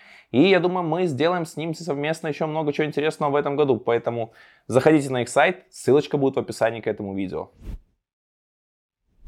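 No technical faults can be heard anywhere in this speech recording; the signal stays intact throughout.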